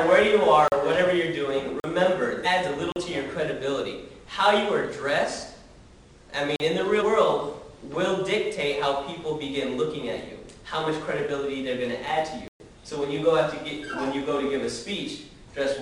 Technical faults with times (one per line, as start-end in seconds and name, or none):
0.68-0.72 block of digital silence
1.80-1.84 block of digital silence
2.42-2.47 damaged data in a compressed stream
2.92-2.96 block of digital silence
6.56-6.60 block of digital silence
6.97-7.03 damaged data in a compressed stream
12.48-12.60 block of digital silence